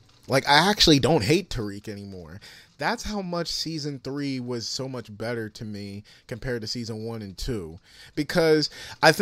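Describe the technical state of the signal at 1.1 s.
At 1.1 s the signal is intact, with no dropout, distortion or other fault in the speech at that moment.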